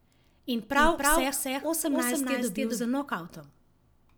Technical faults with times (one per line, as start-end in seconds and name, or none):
0.76-2.84 doubled audio track